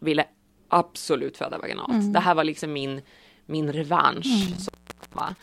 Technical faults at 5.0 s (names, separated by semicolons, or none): intermittent contact